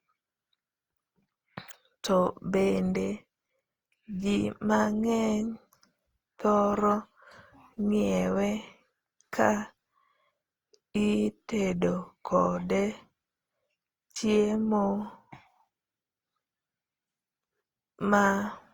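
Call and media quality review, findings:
Generation loss, throughout, 0 s to end. Speech sounds swirly, smeared and hollow, consonant attacks blurred, content up to 20.2 kHz. Likely repeated lossy re-encoding, roughly five passes, Opus-like at about 48 kbit/s, each requantising on shifted frames, stacking noise and spectral holes.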